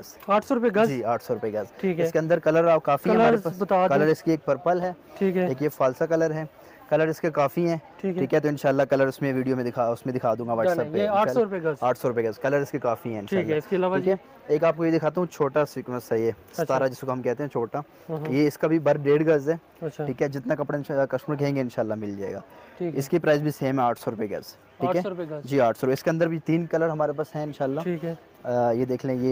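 No technical faults can be heard anywhere.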